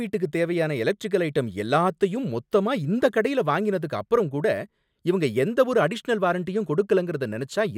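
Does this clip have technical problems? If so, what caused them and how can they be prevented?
No, there are no technical problems in this clip.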